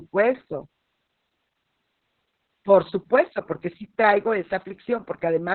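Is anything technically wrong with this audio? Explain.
Yes. Throughout, Opus voice compression is heavy: in its narrowband SILK mode, the narrowed band and coarse excitation leave the speech muffled, hoarse and robotic, consistent with roughly 6 kbps. A spectrogram shows nothing above 4.2 kHz.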